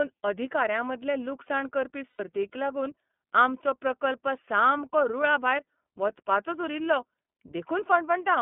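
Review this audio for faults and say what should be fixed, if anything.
The whole clip has iLBC codec damage, and it's pretty obvious. The speech sits in a narrow band of roughly 150 Hz to 3.5 kHz, and it sounds a bit rough and synthetic because each 30 ms frame's excitation is coded on its own. That fits iLBC's 13.33 kbps mode. To avoid this, carry the call on a wideband codec instead.

There are also lost iLBC frames from 2.10 to 2.20 s, just after "लुकसाण करपी" and right before "लागून आमचो प्रकल्प सामको". The decoder fills the gap with the last pitch cycle plus some noise, which comes out as a short buzzy held vowel of about 90 ms. That fits three dropped frames, and the speech snaps back right away. Adding jitter buffering or redundancy would keep this from happening.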